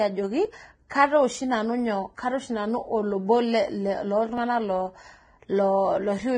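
Throughout the speech the sound is hissy and grainy, which is likely Vorbis compression at a low bitrate in the region of 22 kbps. The damage is heavy. The encoder has pulled its cut-off down and quantised the remaining treble so coarsely that fine detail has been replaced by noise of similar energy, leaving roughened tones and consonant onsets that lack definition.

At 0.45 s there is a small forward jump. Similar jumps occur at 1.35 s, between "ajoki kataa" and "nanu nyo", and at 4.38 s. Each is likely a dropped buffer (overrun), where the capture program failed to read its samples before the hardware overwrote them. The missing piece is not filled with silence. The audio on either side is spliced directly, so the sound skips ahead. Roughly 15 ms goes at the first point and only a few milliseconds at each of the other two.

At 0.9 s an attack is preceded by a brief wash of hiss, about 16 ms long, and the onset itself sounds softened. 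This is pre-echo. The transform block containing the attack had its quantisation noise sized for the loud portion, and that noise was spread across the whole block, including the quiet stretch just before the transient.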